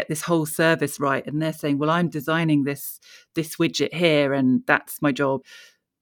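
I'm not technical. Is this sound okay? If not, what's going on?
Yes, this sound is okay, and nothing in it goes wrong.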